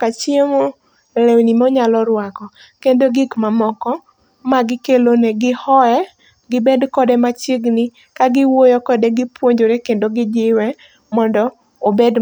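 A speech recording with a single Bluetooth stall at 3.36 s, where the sound drops out for about 5 ms and then resumes. The likely cause is radio interference delaying packets until the headphones' buffer emptied and playback briefly halted. On a waveform this shows as a short flat gap cutting through the speech. On a spectrogram it is a thin vertical blank column across all frequencies.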